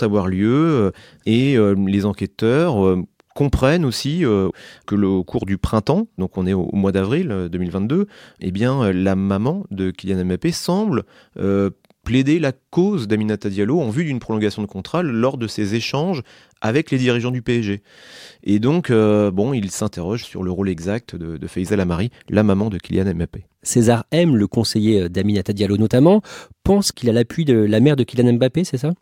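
No technical faults can be heard anywhere in this speech recording. There is no moment in it that needs to be marked with a time.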